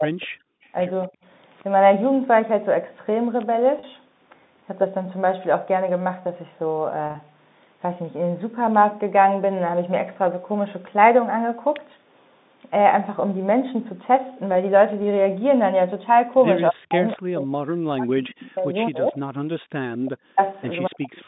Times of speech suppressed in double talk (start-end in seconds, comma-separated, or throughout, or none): 0.00-0.40, 1.08-1.15, 16.68-19.25, 19.96-20.41, 20.88-21.27